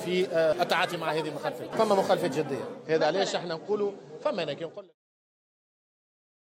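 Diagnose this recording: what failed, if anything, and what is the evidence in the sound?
Digital radio blending to analogue at reception, 2.72 to 5.52 s: a 152 ms cross-fade to FM drops the level about 3 dB and adds faint hiss.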